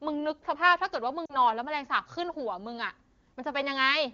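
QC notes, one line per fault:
1.25–1.36 s, lost AMR speech frames: about 40 ms of speech, which fits two 20 ms frames, failed to decode. The AMR-WB decoder concealed the gap by repeating the last good pitch and vocal tract parameters at decreasing gain, so the sound smears and dips toward silence rather than cutting cleanly. On recovery the speech returns weak or rough for a moment until the decoder state resettles, against the clean wideband sound around it.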